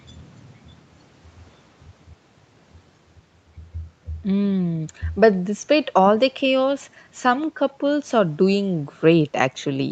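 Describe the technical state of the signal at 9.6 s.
At 9.6 s the speech comes through intact, with no fault at that moment, only the ordinary band limit of a call path that carries nothing above about 8 kHz.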